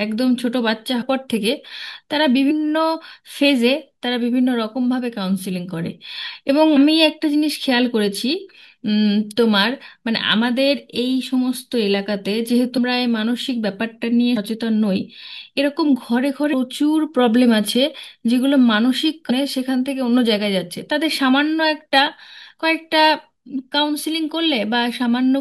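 Compressed frames are skipped at 1.01, 2.50, 6.75, 12.76, 14.36, 16.52 and 19.29 s. Missing or rejected frames make the speech jump ahead, from about 70 to 300 ms. Each join is a brief smeared blip.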